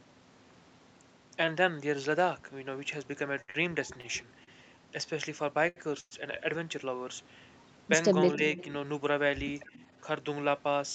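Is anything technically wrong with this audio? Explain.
Yes, this speech clip has several call-transport and echo-control faults.

Repeated stalls (stutter), 3.41 to 4.49 s: packets kept arriving late, so the jitter buffer emptied four times. The receiver stretched sound to fill about 0.18 s, the longest gap 68 ms, so the passage drags and stutters.

Short stall from a late packet, 5.69 to 5.78 s: one packet missed its slot, and the last sound is held for 74 ms before playback resumes from the same point.

Call audio freeze, 6.00 to 6.13 s: likely packets held up in transit. The receiver continues the last sound for 110 ms, fading into about 30 ms of silence, then carries on where it stopped.

Speech suppressed in double talk, 8.37 to 8.42 s: a brief dip of roughly 5 dB lasting about 50 ms, likely the echo canceller turning the talker down while both sides spoke.

Echo leak, 8.57 to 8.65 s and 9.73 to 9.87 s: faint, then fainter, scraps of speech return 274 ms late, likely loudspeaker pickup the echo canceller on the loudspeaker side failed to remove.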